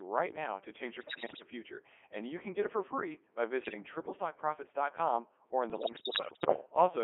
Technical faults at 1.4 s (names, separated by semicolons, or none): Codec 2 vocoder; bit errors on digital voice radio